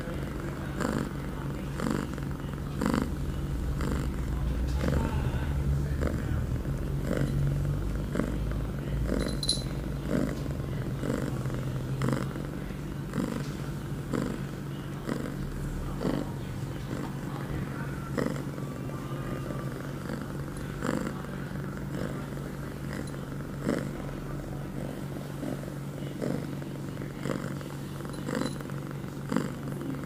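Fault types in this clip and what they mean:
No fault types are present in this clip, so there is nothing to explain about what they mean.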